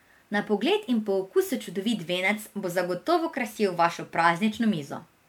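The speech has likely been through generation loss: repeated MP3 coding, the sound pointing to about five passes at a moderate rate in the region of 128 kbit/s. Each re-encode quantises on a shifted frame grid, so noise and missing spectral bands stack up. Across the whole clip this gives a swirly, hollow, smeared quality beyond what one encode at that rate would cause, and consonant attacks lose their crispness.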